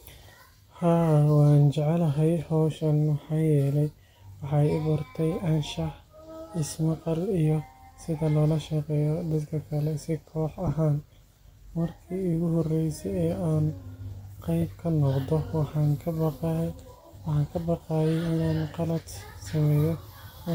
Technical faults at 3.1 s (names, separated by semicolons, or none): none